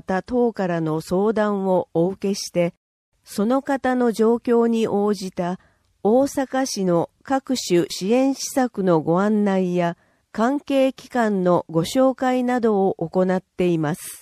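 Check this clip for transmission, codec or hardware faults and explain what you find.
MP3 compression runs throughout the clip, from start to finish, and is the likely cause of the damage heard. The encoder divides the sound into narrow frequency lines and spends its limited bits only where a hearing model says they count. At this level of damage the bit budget fits a low rate of around 64 kbps. Weak lines drop in and out between frames, leaving a plainly audible watery, swirling texture with smeared attacks.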